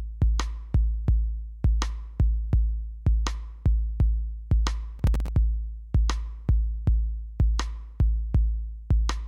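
From 4.99 to 5.28 s a processor overload crackle tears through the sound. The processor misses a run of short buffer deadlines, and each miss drops in silence with hard edges. On the waveform these are tiny flat gaps, and the spectrogram shows vertical broadband streaks.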